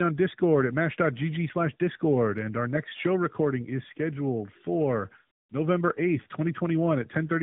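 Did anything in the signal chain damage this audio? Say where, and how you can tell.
Yes. At the codec stage, the damage is tandem speech coding: the speech sounds decoded and re-encoded through two AMR-NB coders with a G.711-style link between them. Throughout, nothing reaches above 3.8 kHz, and the second coder compounds the first's errors, leaving the speech rougher, duller and more warbly.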